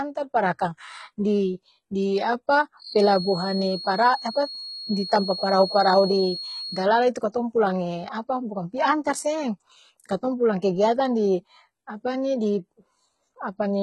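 The speech appears to have likely passed through HE-AAC compression. Only the lower band was coded and the treble was rebuilt by copying lower bands upward, which fits a low bitrate around 16 kbps. The damage is heavy: nothing sounds above 11.8 kHz, and s sounds come out gritty and metallic because the replicated harmonics do not line up.

From 2.77 s to 6.90 s, starting just after "di di", a feedback whistle appears, with the speaker-to-microphone loop likely sitting at the edge of feedback. One tone at 4.4 kHz keeps ringing, roughly 10 dB below the speech, as a thin whistle behind it that swells and fades slowly but never builds into a howl.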